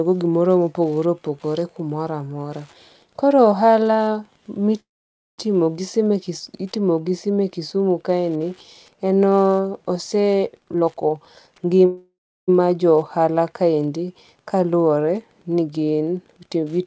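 A faint, steady ticking about ten times a second runs under the whole speech recording, roughly 40 dB below the voice. It is Wi-Fi interference, with a nearby radio's 102.4 ms beacon being rectified by the audio circuit. At 4.80 to 5.40 s the sound stalls into a brief fading buzz and then silence before carrying on intact. This is a call audio freeze, likely caused by delayed packets draining the jitter buffer, which inserted about 0.58 s of gap. From 6.75 to 8.55 s the sound turns dull at the top. That is channel delay (comb filtering): one channel lags by about two samples, fractions of a millisecond, so summing to mono cuts a notch in the highest frequencies. From 10.60 to 11.81 s, leading into "jo ohala kaendi kaluwore", the speech rushes at unchanged pitch, running at 139% speed. This is a jitter buffer speed-up, where the receiver trimmed about half a second of pitch periods to shed excess delay. 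A second freeze at 11.86 to 12.50 s, just before "jo ohala kaendi kaluwore", adds a 0.62 s gap. A milder speed-up to 111% at 15.61 to 16.64 s follows "ohala kaendi kaluwore ni". The band stops at 8 kHz throughout, which is consistent with a G.722 call path.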